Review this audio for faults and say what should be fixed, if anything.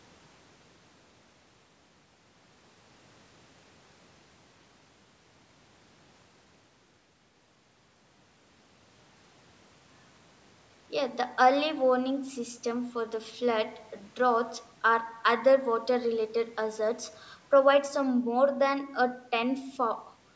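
No faults found; nothing here needs fixing.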